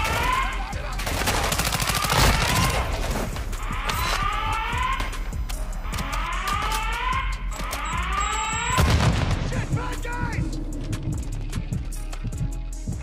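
USB whine runs from 4.28 to 6.28 s. Current drawn in 1 ms bus frames leaks in as a steady 1 kHz tone, loudest at 5 kHz, about 30 dB down.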